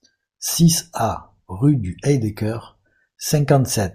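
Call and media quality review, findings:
Nothing to flag here, as the speech comes across without any audible problems worth raising in the ticket.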